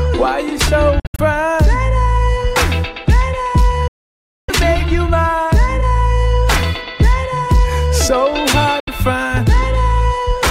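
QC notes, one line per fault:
0.99 to 1.20 s, 3.88 to 4.50 s, 8.80 to 8.89 s: Bluetooth dropout, likely from audio packets arriving too late and being discarded. The sound cuts out and resumes further along, as if it had kept playing. On the waveform and spectrogram these appear as flat, silent gaps with abrupt edges across every frequency. The first is broken into short holes spread over about 0.19 s, the longest 70 ms. The second loses about 0.6 s. The third loses 70 ms. The gaps are multiples of about 23 ms, which fits packet-sized losses.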